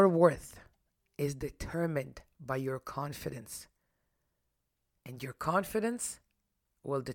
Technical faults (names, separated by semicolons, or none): none